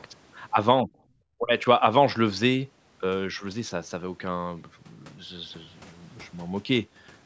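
Speech with two brief level dips, at 0.82 to 0.89 s and 1.39 to 1.65 s, the second much deeper, roughly 25 dB against about 15 dB for the first. The likely cause is speech suppressed in double talk: the echo canceller mistook the talker for loudspeaker echo while both sides spoke and ducked the signal.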